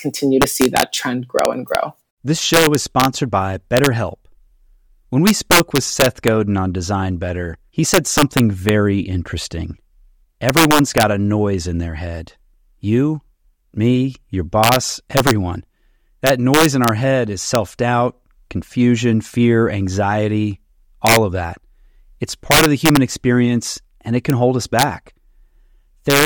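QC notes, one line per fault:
throughout: integer overflow. The speech is driven about 7 dB past full scale, and instead of being limited, the few peaks that exceed it, well under one percent of samples, wrap to the opposite sign. This gives violent cracks on loud syllables, far sharper than clipping's flattened, buzzy distortion.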